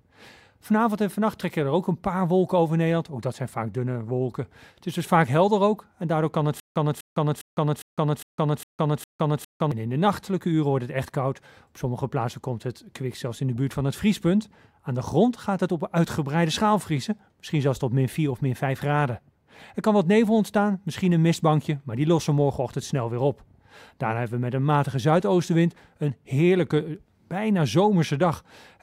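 From 6.60 to 9.72 s there is a stutter with silent gaps: a 250 ms fragment replays seven times, each followed by about 160 ms of dead silence, every 406 ms. Unlike a seamless loop, these silences separate the repeats, likely from a stalled stream retrying.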